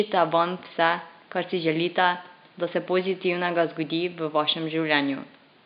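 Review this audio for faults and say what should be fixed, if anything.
Nothing to fix: no system faults are audible in the speech, and the faint room noise sitting about 32 dB below it belongs to the recording space, not the signal chain.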